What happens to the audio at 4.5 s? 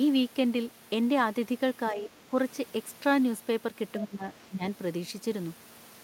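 From 4.49 to 4.63 s, the speech dips sharply, falling by about 15 dB for roughly 150 ms. This is speech suppressed in double talk. An echo canceller likely mistook overlapping talk for loudspeaker echo. It turned the talker down along with it.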